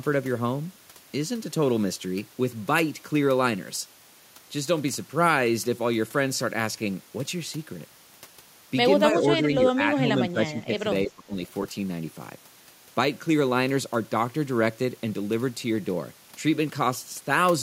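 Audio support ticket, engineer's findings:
Speech suppressed in double talk: level dips at 9.39–9.5, 9.75–9.81, 9.97–10.09, 10.3–10.86 and 11.06–11.36 s, from a slight drop to roughly 20 dB at 11.06 s. Likely cause: echo canceller or suppressor misreading near-end speech as echo during double talk and attenuating it. Waveform: envelope notches mid-phrase. Spectrogram: energy thins across the band in short vertical gaps, longest near 10.3 s.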